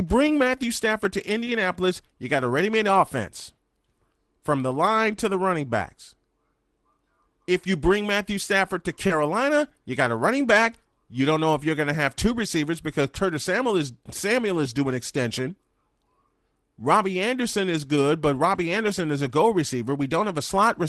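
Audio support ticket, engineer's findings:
Lost packet rebuilt from error correction at 4.85 s, between "from the" and "to the running backs", and at 9.09–9.11 s, 17.95–17.97 s and 19.25–19.31 s. Symptom: brief rough, noisy patches with no gap, the last one about 40 ms long. Component: Opus decoder in-band FEC, playing a low-bitrate copy from the next packet.

Short concealed packet loss at 9.07–9.11 s. Symptom: momentary smear into the following rebuilt patch. Component: jitter buffer/decoder concealment, extending the preceding sound over a 20 ms hole before blending back. Call path shows a band limit near 12 kHz, which fits Opus at around 24 kbps.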